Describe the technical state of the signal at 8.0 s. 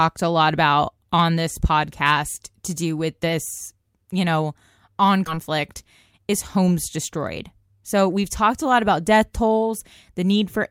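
At 8.0 s the speech is inside a jitter buffer speed-up running from 6.18 to 8.37 s. The receiver trims repeated pitch-period slices, roughly 150 ms in all, to drain excess buffered audio, so delivery runs about 106% fast and sounds hurried. Unlike a resampling speed-up, pitch stays unchanged.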